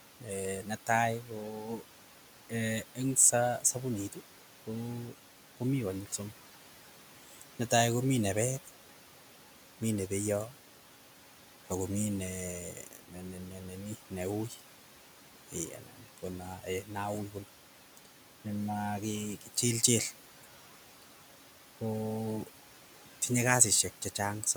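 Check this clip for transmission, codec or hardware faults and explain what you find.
Noise suppression is the source of the problems in this speech: it processes the whole clip and at several points treats parts of the speech itself as noise.

Noise suppressor artifacts run from start to finish. The suppressor estimates the steady background and pulls down any frequency band it judges to be noise, frame by frame, by about 12 dB here. The room noise, sitting about 16 dB below the speech, therefore dips in the gaps and swells back under speech.

Speech cut by the noise suppressor occurs in four spans: 0.2 to 6.2 s, 7.29 to 7.71 s, 12.74 to 18.46 s and 19.41 to 21.04 s. Within each span the suppressor mistakes short stretches of soft speech for background and lowers them by up to about 12 dB, or about 11 dB in the last span. The affected parts amount to well under a second in the first span, about a second in the third, and only brief moments in the second and fourth. 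Quiet consonants and word endings sound swallowed or faint.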